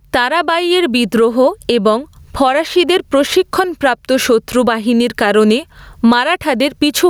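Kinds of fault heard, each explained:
Gain pumping: the level keeps breathing all the way through this speech clip, getting shoved down the moment something loud comes in, a swing of around 20 dB. The likely cause is the input gain being cranked way too high for the mic, with a fast limiter or compressor clamping each peak, so loud and quiet stretches end up squashed together.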